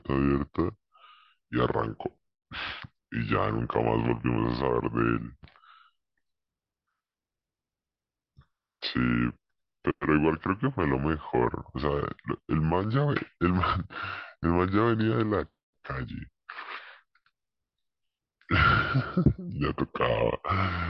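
Wrong sample rate, from start to finish: the speech runs at about 0.73 times its proper speed and sits roughly 5.6 semitones low, since the samples are being clocked out slower than they were captured and nothing resamples them. Because timing and pitch are tied to the same clock, both drop by the same ratio, which fits 44.1 kHz material played back at 32 kHz. Voices come across deep, drawn out and sluggish throughout.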